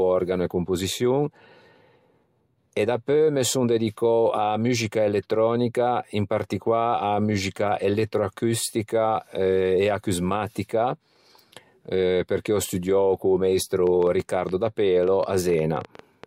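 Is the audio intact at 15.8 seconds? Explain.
No, 15.8 s falls inside a train of clicks running from 13.87 to 16.25 s. Some twenty similar pulses, about 7.2 per second at uneven spacing, tick over the speech and pauses, peaking about 5 dB above it, likely interference or a faulty connection or power supply. Their matching shape separates them from random crackle.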